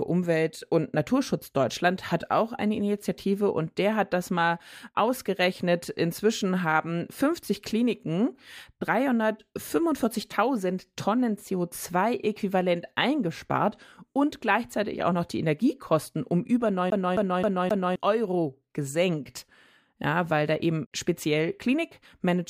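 From 16.90 to 17.96 s, just after "um über", a CD stuck on one turn repeats the same 0.26 s of speech four times, showing as identical waveform blocks separated by brief silent gaps.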